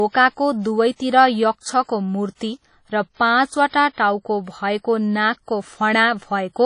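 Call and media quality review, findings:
Washy, ringing speech throughout; hiss rises and falls with the signal; no content above 10.1 kHz. Likely WMA compression, consistent with a low bitrate near 32 kbps: long transform blocks smear quantisation noise, weak components zeroed. Constant across the clip, not tied to onsets.

Pre-echo: brief hiss ahead of sharp attacks, onsets softened. At 1.83 s (52 ms), 3.14 s (31 ms), 3.69 s and 3.93 s (46 ms each, before "टाउको भएको"). Block-wide codec noise bleeds into the quiet lead-in. Precedes transients only, unlike the steady wash.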